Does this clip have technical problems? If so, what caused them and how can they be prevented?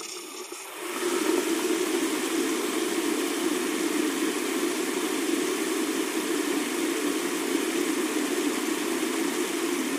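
No, there are no technical problems to hear in this clip. With nothing gone wrong, there is no cause to trace and nothing that needs preventing.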